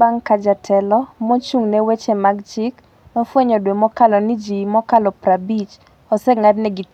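Nothing stood out as a technical fault on listening to this speech recording.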